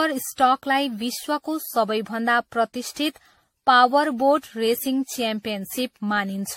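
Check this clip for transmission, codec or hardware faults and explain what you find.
One codec fault runs through the whole speech clip: generation loss. The audio sounds swirly, smeared and hollow, with consonant attacks blurred and nothing above 16.6 kHz. This is likely the result of repeated lossy encoding, roughly ten passes, and the artefact character points to AAC-LC at around 64 kbit/s. Each decode and re-encode quantises again on a shifted frame grid, so noise and spectral holes accumulate beyond what a single pass at that rate would produce.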